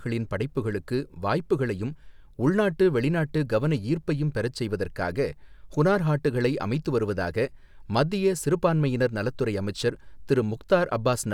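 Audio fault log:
No technical faults can be heard anywhere in the speech signal.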